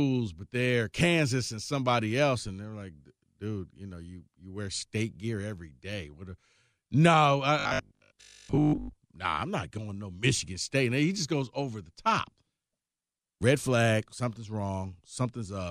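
From 7.59 to 8.93 s the speech goes robotic, a rigid 50 Hz buzz, most likely from one 20 ms buffer repeating while most of the real audio gets skipped.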